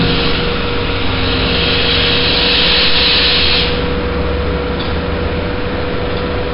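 This recording of sounds has hard clipping throughout, driven about 12 dB past full scale so that roughly a tenth of the samples are cut flat. That gives a harsh fuzz tied to the loud moments, unlike codec hiss, which follows level everywhere. It also carries heavy 4-bit ADPCM compression, heard as gritty hiss riding on every loud sound and distorted attacks, with nothing above 5.3 kHz, which fits a rate near 44 kbps and a low sample rate.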